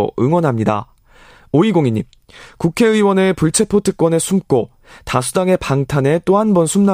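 No technical faults can be heard anywhere in this recording of speech.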